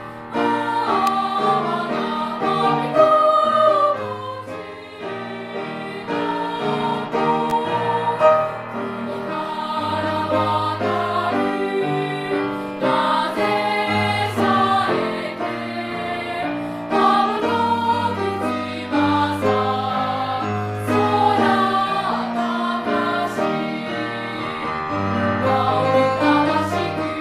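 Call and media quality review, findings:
Sharp snap at 1.07 s, peaking near -5 dBFS. Second, weaker snap at 7.5 s, around -10 dBFS. Both electrical switching spikes, the first about 3 ms long, the second about 14 ms, sitting on top of the sound. Probable component: a nearby switch, relay or motor, likely arcing and coupling into the audio line. Brief discharge induces a fast transient, heard as a tight click rather than a dropout. Underlying audio continues unbroken beneath both events.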